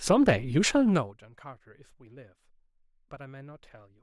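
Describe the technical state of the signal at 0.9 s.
At 0.9 s the speech carries a fine ticking, zipping texture as its level falls, and this zipper noise runs from about 0.82 to 1.23 s. The drop, roughly 25 dB overall, is applied in coarse steps at around 200 a second rather than as a smooth ramp. Each abrupt jump in gain puts a tiny click into the waveform, and together those clicks form the buzzy rasp that rides on the speech while the level moves.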